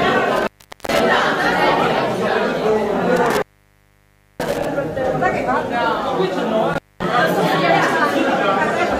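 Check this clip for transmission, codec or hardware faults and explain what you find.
Three breaks from intermittent contact occur, at 0.36 to 1.00 s, 3.16 to 4.65 s and 6.73 to 7.04 s. A loose cable or plug opens briefly. The sound drops out for about 420 ms, 977 ms and 223 ms respectively, with crackle at the edges of each gap.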